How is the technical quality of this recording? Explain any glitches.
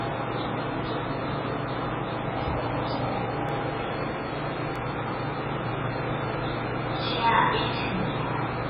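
Not great. There's heavy codec damage throughout, plus two small glitches.

The MP3 compression is the big one. Weak detail flickers in and out frame to frame, giving a watery, swirly texture and smeared attacks. That level of damage fits a very low bitrate, around 16 kbps, as the likely cause.

There are two dropped buffers (overruns), at 3.49 s and 4.76 s. Each is a tiny skip forward, losing only a sliver of a couple of milliseconds, with no gap of silence. The likely cause is the recording software not reading samples before the hardware overwrote them.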